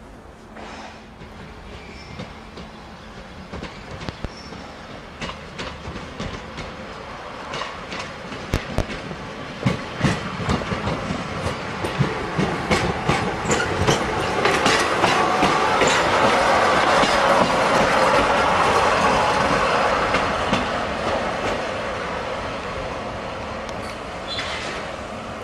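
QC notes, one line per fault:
4.09–4.29 s and 8.54–8.82 s: loud pop. Each event is a pair of sharp pops in quick succession. The first peaks about 15 dB above the surrounding sound, the second about 20 dB. The audio carries on underneath both. The likely cause is a sudden voltage step or pulse, from a plug, a switch, static or a driver glitch, added to the signal. Later circuits shape that pulse, so it lands as a pop or thump.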